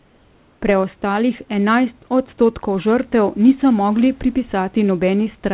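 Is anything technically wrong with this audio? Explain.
Yes. Comfort noise in place of the background, 0 to 0.62 s: the opening stretch is a steady, featureless hiss about 2 dB quieter than the real room noise. The likely cause is discontinuous transmission, with the receiver synthesising shaped noise while the sender sent nothing.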